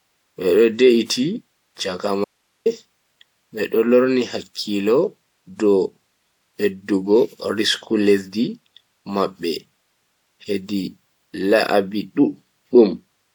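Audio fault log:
2.25–2.66 s, audio dropout to a faint residue: the speech cuts out abruptly for about 0.41 s, and what fills the gap is plain hiss sitting roughly 50 dB below the voice, with no fade in or out on either side. Because the hiss persists rather than dropping to digital silence, the signal path after the break evidently stayed live while the wanted audio stopped arriving, most likely a brief loss at the source or link feeding an otherwise running input.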